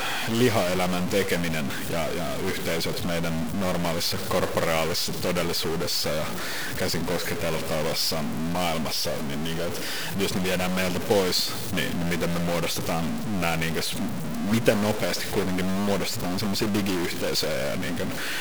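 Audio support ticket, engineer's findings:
Stuck bit, likely a converter bit or data line held high or low, throughout. Speech carries harsh buzzy distortion; pauses fill with noise; error step around -25 dBFS.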